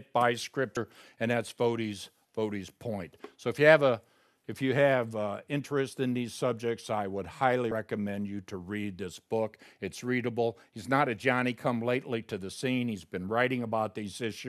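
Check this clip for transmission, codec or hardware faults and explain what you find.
Two compressed frames skipped faults occur in this speech, at 0.76 s and 7.71 s. Whole frames of about 26 ms each never get decoded, so the audio jumps forward, roughly three frames (around 70 ms) the first time and four (about 100 ms) the second. Overlapping neighbour frames blend across the join, giving a short smeared blip instead of a sharp click. Unlike a dropout, there is no silent gap; material simply vanishes.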